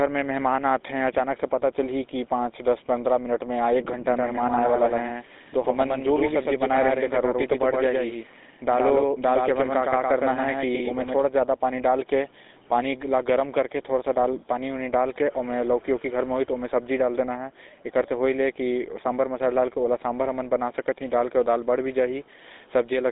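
From start to finish the speech carries the sound of the GSM full-rate codec. The coder models the vocal tract and excites it with a sparse, regularly spaced pulse train, and at this damage level the result is a plainly audible buzzy, gravelly roughness, consistent with a 13 kbps GSM stream. The band sits between about 250 Hz and 3.7 kHz, with nothing above 3.8 kHz, so sibilants and breath detail are gone.

From 4.08 s to 11.22 s the speech is doubled: a second full-band copy trails the original by about a tenth of a second, roughly 5 dB quieter, giving a clean slapback with no decay or room colour. It switches on and off abruptly at those times. The likely cause is the same signal reaching the mix twice, once through a slower capture path or an edit leaving two offset copies.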